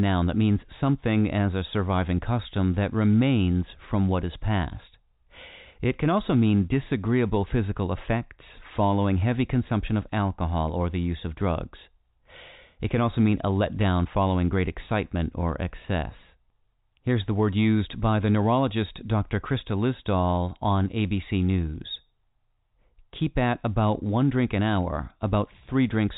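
No technical faults can be heard in this speech recording. It has come through G.711 mu-law telephone coding at 64 kbps, so nothing above 4 kHz is present and a faint quantisation hiss, about 38 dB below the signal, rises and falls with the level of the speech.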